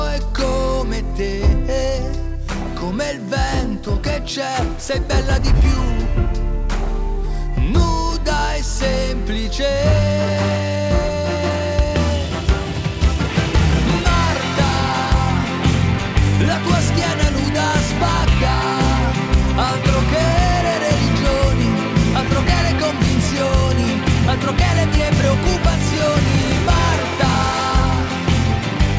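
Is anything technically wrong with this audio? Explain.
No, nothing technically wrong can be heard here.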